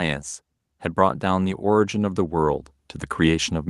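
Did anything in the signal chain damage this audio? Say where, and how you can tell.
Yes. The damage sits in call processing, where automatic gain rising takes hold from about 0.94 s and continues to the end of the clip. From that point the speech and the background noise floor swell upward together, a slow, steady climb rather than a jump. That shared rise is the tell: the control judged the input too quiet and kept raising its gain, lifting everything in the signal at once.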